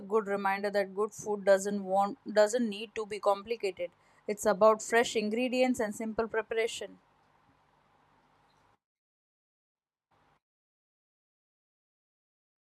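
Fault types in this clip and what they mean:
No technical faults can be heard in the speech recording; the signal holds steady throughout, with no dropouts, distortion or interruptions.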